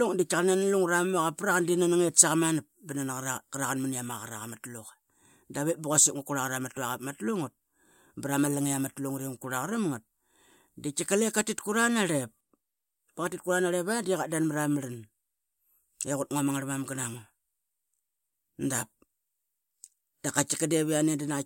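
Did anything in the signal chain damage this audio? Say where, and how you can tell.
No, no damage is audible.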